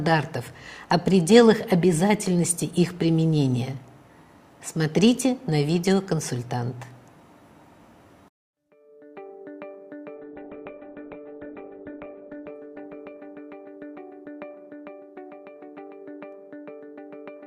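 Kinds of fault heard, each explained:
Call bitrate drop: From 10.21 s to 15.67 s the bandwidth estimate falls, and the encoder is forced onto far fewer bits. The sound turns coarse, rough and watery. Everything above 4 kHz vanishes, where before the band reached 20 kHz, so the top end goes dull and muffled. The worst stretch lasts 1.86 s. Its grain points to a rate near 8 kbps, down from around 64 kbps. Detail returns as the bitrate recovers.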